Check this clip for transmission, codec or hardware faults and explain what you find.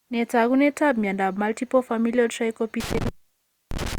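One hardware fault is present: an intermittent contact from 2.80 s to the end of the speech. A loose cable or plug breaks the signal path for about 0.63 s in total, so the sound drops out abruptly with crackle at each break, leaving faint hiss while the connection is open.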